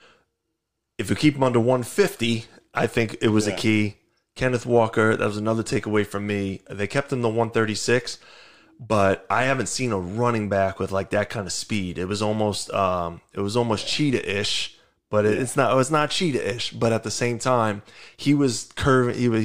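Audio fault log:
Nothing stood out on a careful listen to the speech in this recording.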